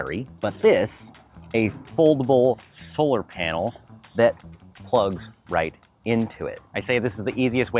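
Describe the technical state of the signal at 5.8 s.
Nothing at 5.8 s points to a technical fault; the signal is intact at that moment.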